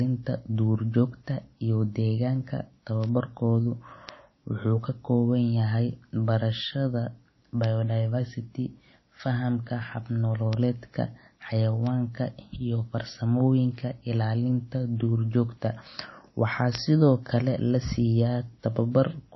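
Throughout the speech the sound is watery and swirly, with nothing above 5.8 kHz and plainly audible smearing on consonants. This is likely MP3 compression at a low bitrate, which fits roughly 24 kbps, where the encoder cuts the treble and weak frequency lines flicker between frames.

Sharp, isolated ticks at 3.04, 4.09, 7.64, 10.53, 11.87 and 16.75 s are bit error spikes, where a flipped bit makes the waveform jump and snap back, pointing to one corrupted sample, or two at the last two.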